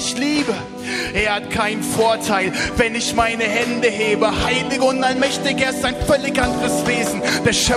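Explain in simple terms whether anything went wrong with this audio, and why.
Nothing went wrong with this audio; there are no faults to point to anywhere in it.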